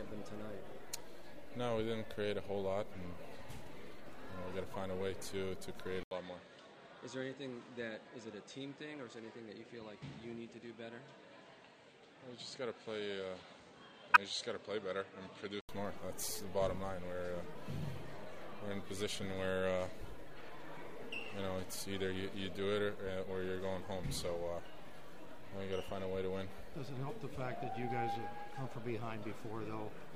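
At 4.74 s a corrupt frame is decoded: flipped bits in one compressed frame misplace energy, leaving a faint blip. From 6.03 s to 15.69 s the input has likely switched to a poorer device. After an 80 ms silence the sound turns dull, with nothing above 8.7 kHz, a little quieter, and with a faint new noise floor. Within that stretch, from 14.14 s to 14.17 s, another corrupt frame produces a loud squeaky burst.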